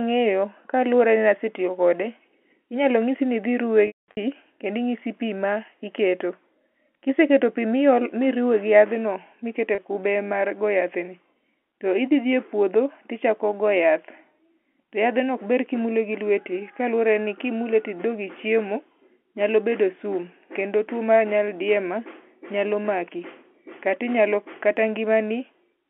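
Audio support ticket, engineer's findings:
Packet loss with pitch repetition, 3.87–4.17 s: about 270 ms lost across 300 ms, longest gap 210 ms; held buzzy tone fading to silence, cross-fade back. Again at 9.75–9.78 s, 30 ms, brief held buzz. Receiver concealment repeating the last pitch period. Band-limited G.711 line audible.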